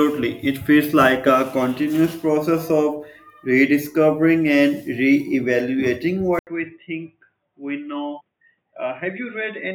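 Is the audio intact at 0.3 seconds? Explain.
Yes, the speech at 0.3 s plays through cleanly, with no dropout, click, distortion or other fault at that moment.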